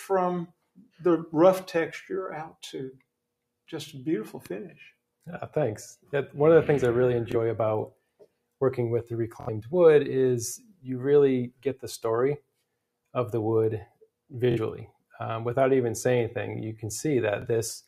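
A speech-style noise suppressor has been left running on this material the whole way through, and it never settles. It keeps treating held tones and tails as noise, so the level breathes up and down by a few dB and the sound pumps and thins.

The first clear case of sound cut by the noise suppressor comes at 0.47 to 1.01 s, where the sound sinks by up to about 21 dB for around half a second.

At 7.32 s there's a Bluetooth stutter. A packet went missing, and the receiver replayed its last buffer for about 23 ms, which gives a short repeated blip before the audio jumps forward as if it had played on.

The suppressor clamps down again at 7.91 to 8.45 s, up to about 22 dB.

At 9.41 to 9.49 s a longer Bluetooth stutter repeats for about 70 ms, and you hear a brief machine-gun buzz.

More suppressor cuts follow, each a few tenths of a second or less:
10.58 to 10.88 s, about 18 dB
11.49 to 11.85 s, about 21 dB
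12.37 to 12.55 s, about 21 dB
13.86 to 14.07 s, about 20 dB

The last two stutters are at 14.51 to 14.58 s, repeating for about 46 ms, and at 17.42 s, about 23 ms.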